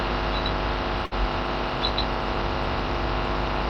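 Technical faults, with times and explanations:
1.05 to 1.14 s: short stall from a late packet. A packet arrived late, leaving the jitter buffer with nothing to play when it was due. The receiver filled the gap by stretching the last sound for about 61 ms, then picked up exactly where it left off once the packet came in. Nothing is lost, but that moment is held too long, with a faint buzz or dip, and everything after it runs about 61 ms later than before.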